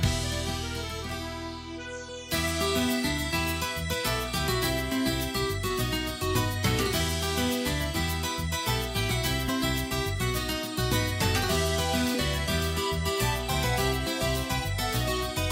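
At 9.47 s the audio jumps ahead by about two frames, roughly 50 ms of sound, a case of compressed frames skipped: frames of about 26.1 ms were never decoded. Overlapping neighbours smear the join into a brief blip, seen as a soft vertical seam on the spectrogram and a slight discontinuity in the waveform.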